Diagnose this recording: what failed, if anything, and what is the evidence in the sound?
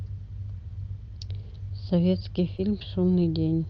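The fault sits in the network stage, with receiver-side recovery: a short concealed packet loss at 2.57 to 2.61 s. About 20 ms of audio never arrived in time, and the decoder bridged roughly 11 ms by extending the preceding sound before cross-fading back into real audio. It is heard as a brief smear or wobble. On a spectrogram a narrow vertical seam appears against the Opus call path's band edge near 8 kHz.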